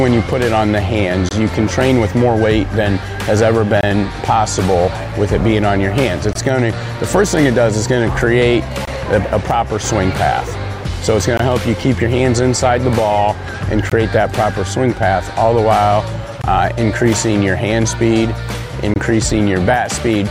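A gap between chunks appears at 1.29, 3.81, 6.33, 8.85, 11.37, 13.90, 16.42 and 18.94 s. Each is a silence of about 21 ms, inserted between 2.5 s chunks, so the sound keeps stopping briefly at a steady rhythm.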